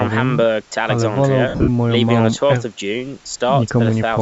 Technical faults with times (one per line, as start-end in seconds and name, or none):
1.48-1.68 lost LE Audio frames